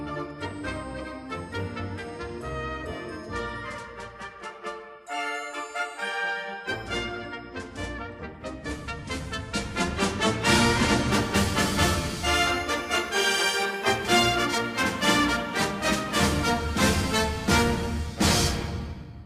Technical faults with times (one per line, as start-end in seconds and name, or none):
11.12-19.26 crude rate conversion